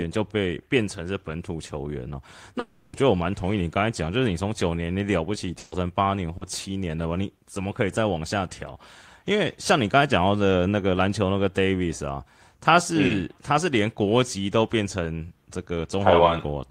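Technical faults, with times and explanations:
2.59–2.95 s, long network dropout: about 340 ms of sound is replaced by a continuation of the preceding sound, likely because no packets arrived, and speech resumes with that stretch lost.
5.59–5.73 s, burst of packet loss: 120 ms of consecutive packets never played; the receiver extended and faded the last sound, then speech jumps ahead past the missing part.
6.37–6.43 s and 13.07–13.11 s, short concealed packet loss: gaps of 40 ms and 20 ms were patched by continuing the prior sound, heard as brief smears before blending back.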